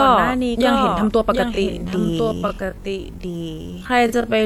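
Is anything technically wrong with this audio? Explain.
Yes, two things. Throughout, there's a doubled audio track: a second copy of the speech trails roughly 0.7 s behind, about 5 dB quieter, likely from a slower capture path.

From 1.46 s to the end there's a time-stretched section, slowed to 0.564× speed with pitch unchanged. That was likely done by repeating short chunks, so it drags.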